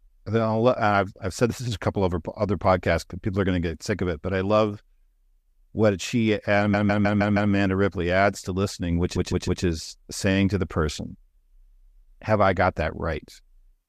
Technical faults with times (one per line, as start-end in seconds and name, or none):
6.73-7.51 repeated frames
9.16-9.63 repeated frames